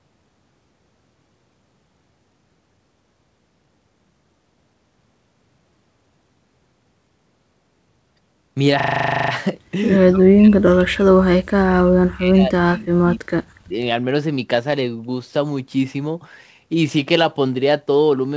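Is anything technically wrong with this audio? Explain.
Yes. The speech has two kinds of fault.

From 8.8 to 9.32 s there is a system hang loop. The computer or audio driver stalled while the sound hardware kept replaying the last stretch of its ring buffer. A 40 ms slice repeats 13 times at 25 Hz, which fits a buffer of about that length. Because the piece is so short and repeats so fast, it comes across as a hard, rapid stutter or rasping buzz. When the loop ends, the speech picks up without any obvious gap.

From 10.1 to 13.44 s, and again briefly from 13.64 to 13.79 s, the talker fades out. This is likely speech suppressed in double talk. The echo canceller apparently could not tell the near talker apart from loudspeaker echo while both sides were speaking, so it turned the near talker down. Across roughly three seconds the voice sinks and breaks up, dropping by about 40 dB at its deepest. 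The short second dip goes down by about 35 dB. The missing top above 8 kHz comes from the G.722 call path and is expected.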